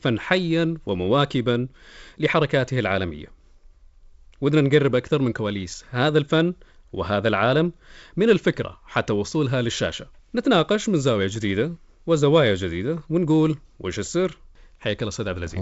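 No technical faults can be heard in this recording.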